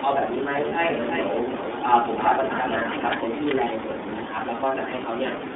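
The whole clip runs through the iLBC codec, so speech sits between about 250 Hz and 3.6 kHz, with a plainly rough, synthetic edge that fits its 13.33 kbps, 30 ms frame mode. At 0.68 to 0.73 s there are lost iLBC frames: the decoder holds a brief buzzy, vowel-like patch, which fits a single missing 30 ms frame, then snaps straight back.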